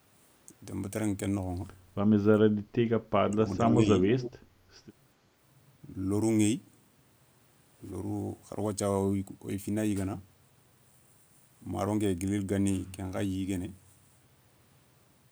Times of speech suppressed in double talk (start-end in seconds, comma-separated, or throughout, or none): 3.25-4.08